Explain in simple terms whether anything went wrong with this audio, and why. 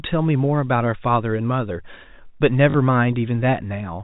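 Around 2.70 to 2.74 s the speech briefly stutters with a short robotic buzz. That is packet loss with last packet repeated: about 40 ms of sound went missing, which fits two 20 ms packets, and the receiver filled the gap by replaying the last piece it got.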